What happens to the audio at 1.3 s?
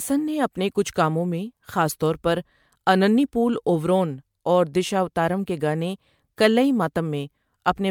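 At 1.3 s the speech carries generation loss, present through the whole clip. It sounds swirly, smeared and hollow, and attacks blur. This likely comes from repeated MP3 encoding, about seven passes, fitting 128 kbit/s. Each pass adds fresh quantisation noise. Nothing sounds above 19.9 kHz.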